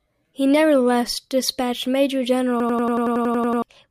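At 2.60 s the speech locks into a system hang loop that lasts until 3.62 s. The playback side froze while the sound hardware kept replaying its ring buffer. One slice of about 93 ms repeats exactly, 11 times, at 10.8 Hz. That loop length fits a 4096-sample buffer. It sounds like a rapid machine-gun stutter. About a second of real audio is lost beneath it.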